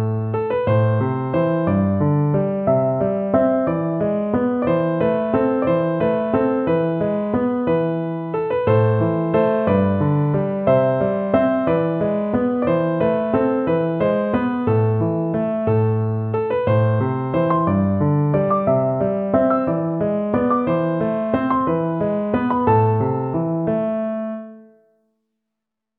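No technical faults are audible anywhere in this audio.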